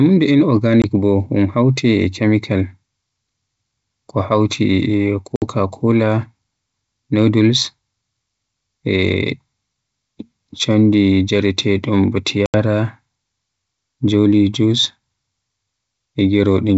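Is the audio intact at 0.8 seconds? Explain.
No. From 0.82 to 0.85 s there is packet loss on an ADPCM call: about one packet, 20 ms, drops out as a hard-edged silent gap. The decoder's predictor and step size lose track of the sender's, so the speech resumes with slight distortion before settling.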